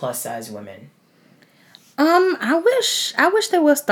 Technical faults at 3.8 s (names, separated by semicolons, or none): none